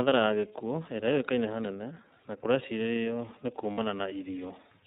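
Across the whole recording the speech passes through the iLBC codec, a narrowband VoIP coder that rebuilds each frame's excitation on its own. The sound has a rough, slightly synthetic edge, with plainly audible coding damage, and the tone fits a 30 ms frame mode around 13.33 kbps. On a spectrogram, energy stops sharply at 4 kHz with nothing above it. The harmonics below look smeared and grainy rather than cleanly striped.

At 3.72 s, running to about 3.79 s, iLBC frames are lost, a gap of about 60 ms that matches two 30 ms frames. The decoder fills the hole by repeating the last pitch cycle blended with noise, so the sound briefly turns into a held, faintly buzzy vowel. On the spectrogram the harmonics flatten into steady horizontal lines with a noisy haze. The waveform shows a short run of near-identical repeated periods, and normal speech returns right after.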